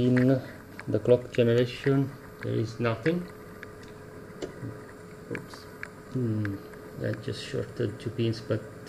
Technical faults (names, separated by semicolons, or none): none